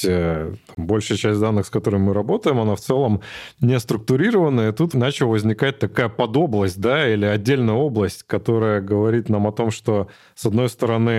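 At 0.75 s the speech drops out for about 24 ms, a gap at a join of encoded pieces. Separately encoded segments were joined untrimmed, so encoder start delay and final-frame padding remain, and the sound briefly stops, then resumes where it stopped.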